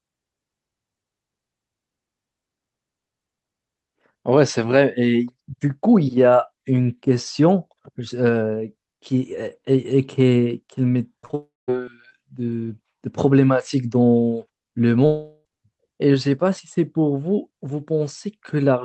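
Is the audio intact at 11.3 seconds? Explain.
No. From 11.21 to 11.35 s there's a run of short concealed packet loss: three back-to-back gaps starting at 11.21, 11.25 and 11.31 s, each a few hundredths of a second. The decoder papered over each one by extending the preceding sound, so you get a quick smear or wobble rather than clean audio.

Right after that, from 11.35 to 11.70 s, the sound carries on as a fading buzz or hiss and then drops to silence for roughly the last 0.18 s. That's likely a long network dropout, with the receiver's fill running out before the real audio resumes and the lost section never recovered.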